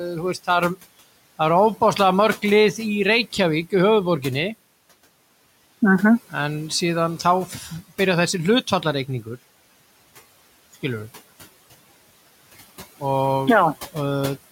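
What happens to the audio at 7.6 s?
The noise suppressor mistook part of the speech for noise between 7.47 and 7.71 s, pulling about a tenth of a second down by about 7 dB, so it sounds swallowed and faint.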